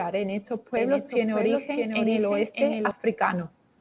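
From 0.77 s to 2.91 s, just after "en estos", the speech carries a doubled audio track. A second, full-band copy runs roughly 0.7 s behind the original at a level only a few decibels lower, around 5 dB down, with no decay or room colour. It starts and stops abruptly at those boundaries. The likely cause is the signal being captured a second time through a slower path. Both copies share the narrowband call sound, with nothing above 4 kHz, consistent with a G.711 call path.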